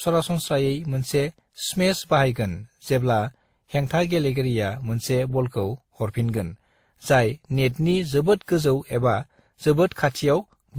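Throughout the speech, the sound carries transcoding between lossy codecs. Two layers of compression artefacts are heard at once. There is a dulled top end. Under that sits a second, different coloration. The pattern likely comes from one encode being re-encoded by another. It fits WMA at about 64 kbit/s followed by Opus at 32 kbit/s. Opus spends its bits on the earlier damage and adds its own.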